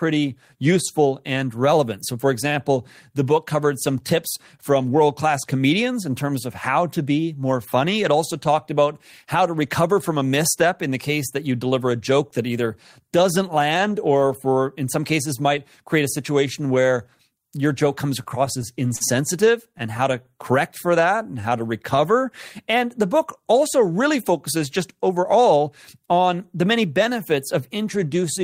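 Recorded speech with jitter buffer trouble in the second half. Repeated stalls (stutter) start right after "where your joke comes", from 18.23 to 19.02 s. Five short holds fill 90 ms in all, the longest 45 ms. A second burst runs from 19.48 to 20.38 s, with six tiny holds totalling 60 ms, none over 16 ms. Nothing is lost. Packets were arriving late, so the buffer kept running dry. Each time, the receiver stretched the last sound until data returned. The speech hitches and drags.

A jitter buffer slow-down follows from 20.86 to 22.01 s. Speech runs at 91% speed, with pitch unchanged. About 110 ms of extra audio is added. The buffer had run low or had just raised its target delay. To rebuild a reserve, the receiver repeated single pitch periods and slivers of pauses again and again. Sounds come out drawn-out and slightly sluggish.

A jitter buffer speed-up comes between "the book also" and "on the many benefits", from 23.90 to 25.67 s. 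Speech runs at 107% speed, pitch unchanged, and about 150 ms is cut. The buffer held more than it aims for. The receiver trimmed short pieces of one or a few pitch periods many times over. The phrase sounds hurried.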